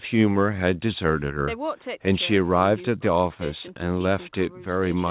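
No audible technical faults.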